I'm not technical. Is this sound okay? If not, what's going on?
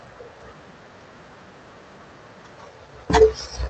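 Yes, this recording of speech sounds okay: it comes across like audio from a normal internet call, and nothing stood out as a problem when listening.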